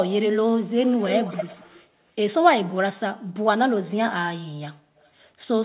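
Echo leak from 0.32 to 1.87 s and again at 4.97 to 5.1 s: a copy of the voice trails 234 ms behind, almost as loud as the speech at first and barely audible later, likely because a loudspeaker end's echo canceller let its microphone pickup return.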